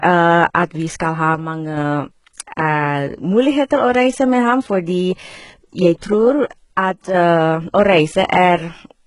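From the start, the speech carries heavy codec damage, likely HE-AAC compression. The treble is rebuilt from lower bands, so sibilants turn gritty. Nothing sounds above 11.1 kHz, which fits a very low bitrate near 12 kbps.

From 1.35 to 1.77 s and from 6.78 to 7.14 s, the level drops abruptly by about 6 dB, then returns. This is likely one channel dropping out before the mono sum.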